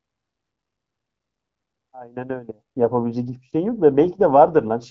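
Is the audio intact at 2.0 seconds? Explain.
Yes, the speech at 2.0 seconds is intact, carried cleanly through the AMR wideband (HD Voice) codec at 12.65 kbit/s.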